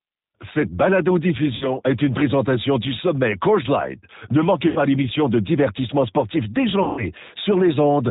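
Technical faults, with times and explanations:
Throughout: G.729 codec. The speech sounds slightly rough and synthetic and nothing is heard above 4 kHz, which fits 8 kbit/s G.729A. Each 10 ms frame is rebuilt from a vocal-tract filter, a pitch predictor and a few pulses. That gives a buzzy graininess rather than the watery smearing of transform codecs.
1.55–1.69 s, 4.68–4.80 s, 6.83–7.06 s: VoIP packet loss concealed by the speech codec. The gaps last 60, 80 and 140 ms and fall just before "est une présentation du", just before "l'émission de divertissement sportif", and just after "l'émission de divertissement sportif". In each gap the decoder repeats its last pitch and filter at falling gain, so the sound stretches into a fading buzzy tone or coloured noise instead of a silent dropout or a hard click. The speech stays weak briefly after each gap while the decoder's state recovers.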